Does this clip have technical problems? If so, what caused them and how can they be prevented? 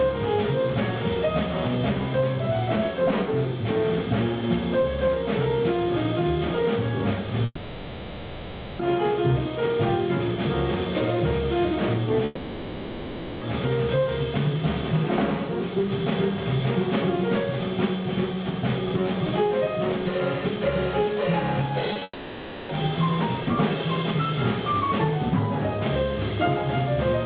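Yes. From 7.45 to 8.81 s, 12.25 to 13.43 s and 22.03 to 22.71 s, the last sound is drawn out into a fading buzz and hiss, and the audio resumes with that stretch missing. This is likely a long network dropout, where no packets arrived and the receiver could only extend what it had. A wired connection or a less congested network path would prevent it.

Just before the third gap, at 21.93 to 21.97 s and 21.99 to 22.03 s, there are two brief smears. These come from short concealed packet loss: about 20 ms of audio missed the decoder each time, and the receiver filled each hole by continuing the preceding sound. A larger jitter buffer or forward error correction would prevent this.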